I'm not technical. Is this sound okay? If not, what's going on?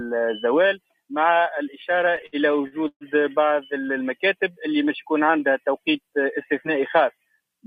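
No. From 1.91 to 3.04 s there are repeated stalls (stutter): data arrived late, the receiver's waiting store ran dry 13 times, and each time it stretched the last sound to fill the wait, up to 130 ms. Nothing is lost, but about a third of that stretch is filler, so it stutters and drags.

From 4.40 to 5.62 s there is a jitter buffer slow-down: the receiver deliberately played slower, at about 92% speed, to rebuild its reserve, adding about 106 ms. The pitch stays the same, but the sound is drawn out.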